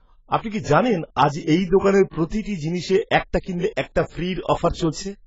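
Low-bitrate audio saved at a high bitrate affects this speech clip throughout: there is no content above 7.6 kHz, likely a cut-off left by an earlier very low-bitrate encoding that the later high-bitrate MP3 cannot restore.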